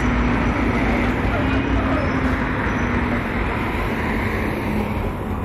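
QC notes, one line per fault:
Throughout: hard clipping, peaks driven about 6 dB past the ceiling and sliced flat on roughly 2% of samples, so loud moments crackle with bright added harmonics.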